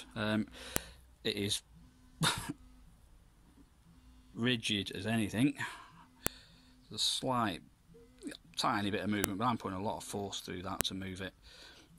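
A file header played as audio gives sharp snaps at 0.76, 6.27, 9.24 and 10.81 s. Each marks a joined piece whose header bytes play as samples, hitting regardless of the surrounding sound.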